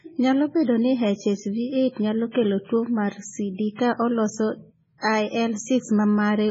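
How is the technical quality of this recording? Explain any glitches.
Technical quality is poor, with heavy codec damage across the whole recording. Throughout, the speech has nothing above about 7.7 kHz and a watery, swirling texture, with sibilants turning metallic and consonant attacks smeared. This is likely MP3 compression at a very low bitrate, consistent with roughly 16 kbps: the encoder drops the treble and switches weak frequency lines on and off between frames.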